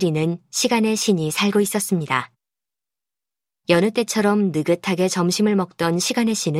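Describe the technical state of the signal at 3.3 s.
At 3.3 s the audio is intact, with no dropout, distortion, glitch or other fault audible at that point.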